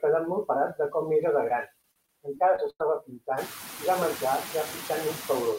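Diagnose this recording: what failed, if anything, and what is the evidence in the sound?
Two failures are audible, in the call processing and in the network. Noise suppressor artifacts run through the whole speech clip. The suppressor pulls the steady background down by about 17 dB, so the noise dips between words and swells beneath them. Around three and a half seconds, the room noise itself steps up by about 16 dB and sits about 13 dB under the speech.

Repeated packet loss (robotic sound) hits from 1.49 to 2.81 s. This is a network fault. Packets kept dropping, and each hole was bridged by stretching the last sound. The gaps total 220 ms, the longest 96 ms. About 212 ms was patched, a sixth of that span. It sounds choppy, with pieces missing.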